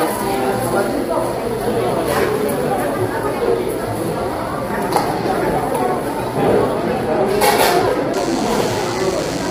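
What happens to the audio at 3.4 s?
At 3.4 s the sound is rough and grainy, with noise filling the gaps between harmonics and a dulled, synthetic-sounding top end. That runs through the whole clip and is likely low-delay AAC compression. Its short frames resolve pitch poorly, and the heavy damage fits a bitrate around 24 kbps.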